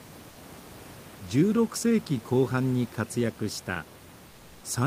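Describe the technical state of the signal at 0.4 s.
Just before 0.4 s, the sender likely paused transmission under discontinuous transmission, consistent with Opus DTX, and the receiver substituted comfort noise in place of the background from 0.29 to 0.37 s. For those 80 ms the real room noise gives way to a flat, featureless hiss about 3 dB quieter.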